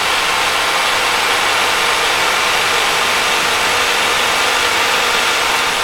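Every sound in this clip of sounds is heard twice, the second time roughly 0.7 seconds later and at about the same level, with no decay or room colour on the repeat. This doubled audio track runs throughout, likely from the same audio being captured again through a slower path and mixed in out of step.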